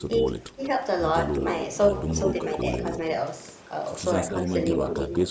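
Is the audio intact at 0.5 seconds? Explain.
No. From 0.41 to 0.6 s the speech dips by roughly 10 dB. This is likely speech suppressed in double talk: with both ends talking, the echo canceller mistook the near talker for loudspeaker echo and attenuated it.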